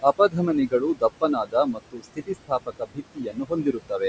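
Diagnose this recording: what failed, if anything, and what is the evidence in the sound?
The room noise, sitting about 11 dB below the speech, pumps from start to finish. It drops away by about 21 dB in the gaps and swells back under the talking. These are noise suppressor artifacts from the call processing stage. The suppressor estimates a steady noise floor and pulls down each band it judges to be noise, frame by frame. Its gain chases the speech, so the residue never settles.

The same stage also produces speech cut by the noise suppressor, heard as syllables and endings going faint or swallowed. It happens at 0.02–0.36 s, with a drop of about 14 dB over roughly a tenth of a second, and at 0.68–1.03 s, with about 20 dB over around a fifth of a second. Across 1.21–4.01 s, dips of up to about 21 dB add up to roughly a second and a half. Quieter speech energy looked like noise to the suppressor, so it was attenuated along with the background. 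The call microphone path's band limit at 8 kHz is part of the normal processing.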